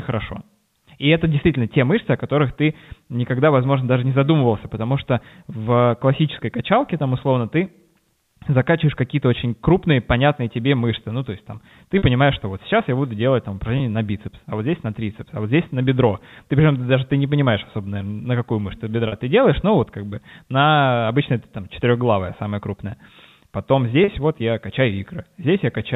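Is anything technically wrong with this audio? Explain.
Yes, there is packet loss with pitch repetition at 11.98, 13.78, 19.08 and 24.04 s. Gaps of 40, 20, 40 and 40 ms, consistent with one or two lost 20 ms packets, are bridged by repeating the last pitch period. Each sounds like a briefly held, buzzy note rather than the silent hole or click of a plain dropout, heard through the narrow G.711 telephone band.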